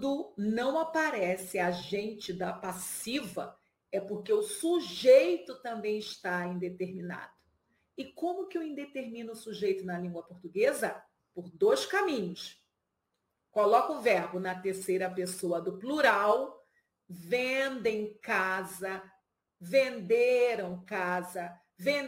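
A gritty, inharmonic fizz rides on the audio from start to finish, the mark of crude rate conversion. The sample rate was changed from 48 kHz to 44.1 kHz by keeping the nearest sample rather than filtering, so samples are periodically dropped and a repeating error pattern adds tones unrelated to the sound, roughly 25 dB below it. Unlike the steady hiss of low bit depth, this buzz follows loud and high-pitched passages and fades with them.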